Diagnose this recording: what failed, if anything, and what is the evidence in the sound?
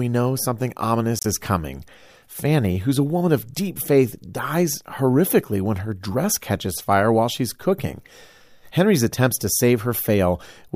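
Codec stage: a corrupt frame decoded at 1.19 to 1.26 s, a chirp or burst of noise across a couple of frames, peaking around -10 dBFS, where damaged bits misplaced energy in frequency.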